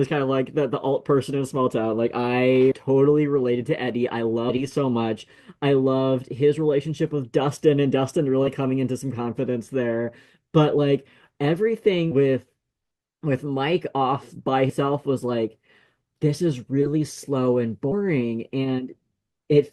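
Compressed frames skipped at 2.71–2.78, 4.49, 12.11, 14.69–14.74 and 17.91–17.93 s. Whole frames never reach playback, so the speech jumps ahead by roughly 70 to 200 ms each time. The jumps fit a 20 ms frame length. On a spectrogram each join shows as an abrupt break in the harmonic pattern. On the waveform the envelope changes shape suddenly.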